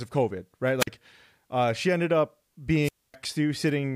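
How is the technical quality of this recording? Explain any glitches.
The speech is interrupted twice by a wireless microphone squelch dropout: at 0.79 to 0.87 s, with about 46 ms of muting, and at 2.82 to 3.14 s, just after "uh she ended up", with about 254 ms of muting. In each case the FM radio link weakens and hiss swells until the receiver's squelch shuts the output, leaving a silent gap before the voice returns. That rise of static before the gap distinguishes it from a clean digital packet dropout.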